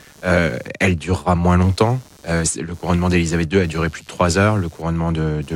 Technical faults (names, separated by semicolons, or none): computer activity noise